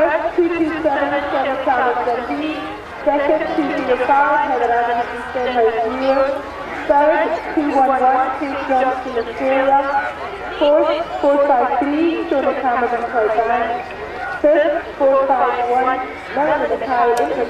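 Nothing is technically wrong with this audio.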